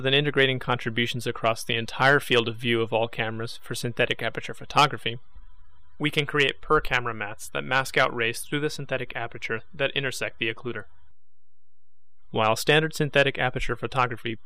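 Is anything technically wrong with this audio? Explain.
Yes, there is a DC offset running through the whole clip: the waveform sits shifted off zero by a constant of about -37 dBFS. It isn't audible as a tone, unlike mains hum or rumble, which move. It appears as steady energy at 0 Hz and quietly eats headroom.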